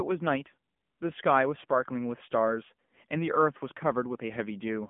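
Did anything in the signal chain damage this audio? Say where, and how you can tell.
Yes. AMR narrowband mobile codec damage runs through the whole clip, at the codec stage. Nothing survives above about 3.5 kHz, and the low end thins out below about 150 Hz, the classic phone-line band. The speech has a plainly audible buzzy, synthetic edge, which fits one of AMR-NB's lower modes, around 7.95 kbps. The codec models the vocal tract and drives it with a few pulses per subframe, so at that rate fine detail collapses into that coded texture.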